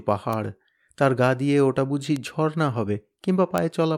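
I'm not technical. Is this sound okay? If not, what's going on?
No. There are three sharp ticks, at 0.33, 2.16 and 3.58 seconds. Each is a bit error spike. One tiny digital value got flipped, so the waveform jumps for an instant and snaps back. It isn't part of the speech.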